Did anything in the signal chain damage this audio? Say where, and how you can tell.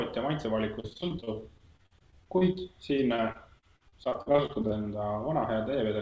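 Yes, at the network stage: repeated packet loss (robotic sound) from 0.80 to 2.57 s and again from 2.97 to 4.84 s. In each stretch the audio breaks into many short holes, the longest 44 ms and 41 ms, patched by stretching the preceding sound, which gives a choppy texture. Unlike a dropout or buffer underrun, the gaps aren't silent clicks but smeared repeats. The G.722 call path, which stops near 8 kHz, is not the cause.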